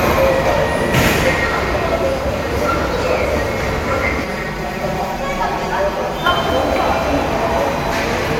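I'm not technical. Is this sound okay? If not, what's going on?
No. From about 4.24 to 6.26 seconds there is channel delay, which causes comb filtering. One side of the stereo sound arrives roughly five thousandths of a second late. When the two sides are mixed together, parts of the sound cancel each other out at evenly spaced pitches, starting near 100 Hz. That is why this stretch sounds hollow and phasey, a bit like it's coming through a tube.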